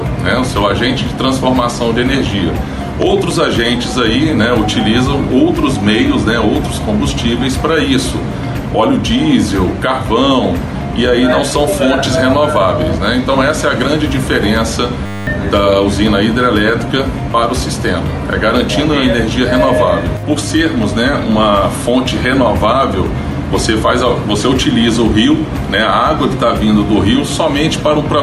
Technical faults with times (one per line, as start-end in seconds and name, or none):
15.06-15.27 system hang loop